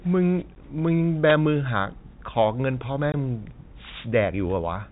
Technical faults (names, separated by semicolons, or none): packet loss filled with silence; wireless microphone noise hit